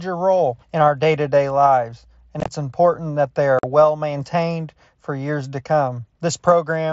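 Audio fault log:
2.40–2.48 s and 3.59–3.64 s, unconcealed Bluetooth headset packet loss: after "to day lives and", 45 ms of audio goes missing in holes scattered over 75 ms, the longest about 22 ms. After "important that they", another 45 ms drops out. The lost headset packets are replaced by silence or an idle pattern, so the gaps have hard, abrupt edges instead of the smeared or repeated sound that concealment would leave.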